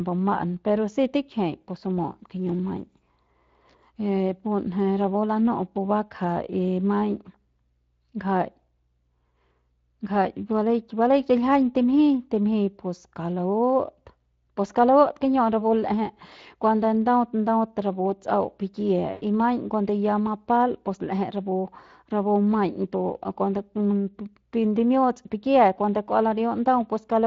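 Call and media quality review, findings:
Speex codec, whole clip: speech hoarse and noisy throughout, plainly audible. CELP excitation starved of bits, with damage consistent with a rate near 20 kbps. Uniform across the clip, which sets it apart from local loss events.

VoIP packet loss concealed by the speech codec, at 1.61–1.65 s and 19.11–19.22 s: sound stretched and fading. The decoder extrapolates the last pitch and filter. Fits about 20 ms and about 100 ms lost.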